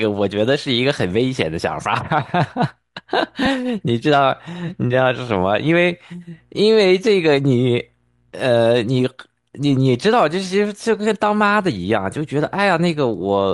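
Right from the start the speech carries a breathy, grainy edge up top, with the high end sounding smeared and noise-filled rather than crisp. That's likely Bluetooth LC3 compression, and the amount of damage fits something like 48 kbps with 7.5 ms frames, where the upper spectrum gets thinned out and patched with noise.

At 3.45 s there's a tiny rough blip, consistent with a lost LE Audio frame, just one of about 7.5 ms. The decoder covered it by reusing the previous spectrum with scrambled signs, so you hear a brief noisy smudge instead of a dropout.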